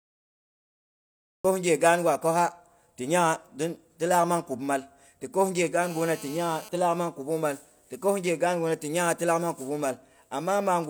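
Speech recording with a cut-off start: the first 1.45 s is digital silence, and the speech enters abruptly at 1.45 s partway through a sound, with no natural attack or fade, because capture or streaming began late. GSM phone buzz runs from 5.82 to 6.69 s, ending just before "ti laak nang kubung". It is a hard, raspy buzz at about 217 Hz with dense harmonics, sitting about 19 dB below the speech and unrelated to it. It holds steady throughout, consistent with a nearby 2G phone on a call whose transmit bursts the audio circuitry rectified.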